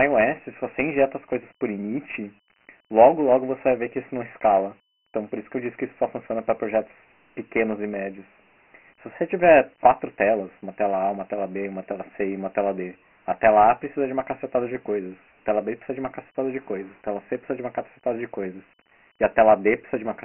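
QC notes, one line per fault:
Throughout: Dialogic VOX ADPCM. The speech is squeezed into a narrow telephone band, thin below about 200 Hz and with nothing above 3.1 kHz. The cut-off sits below a 4 kHz band edge, which fits 4-bit OKI ADPCM at 6,000 samples a second, or 24 kbps. Each sample stores only a coarse 4-bit step from the last, so the quantisation error rides along as a heavy, gritty hiss that follows the speech.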